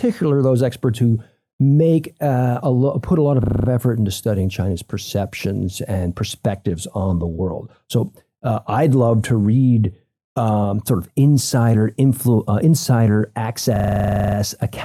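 At 3.44 s, right after "put a lot of", there's a system hang loop. The machine stalls and the hardware keeps replaying one roughly 40 ms chunk, which points to a 40 ms buffer, giving a 25 Hz buzz until 3.68 s before "effort into studying" resumes. The same buzz returns after "uh insider" from 13.76 to 14.36 s. Nothing seems lost either time.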